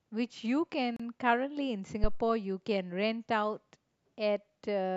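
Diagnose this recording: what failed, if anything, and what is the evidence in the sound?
Gap at a join of encoded pieces, 0.96 to 1.00 s: a 32 ms silence in the speech, where separately encoded 4-second pieces were joined without trimming encoder delay and padding.

Phantom power thump, 2.04 to 2.25 s: a deep low-frequency thud decaying over about 48 ms, from the supply switching on or off on a live analogue input, the step passing through the coupling capacitors.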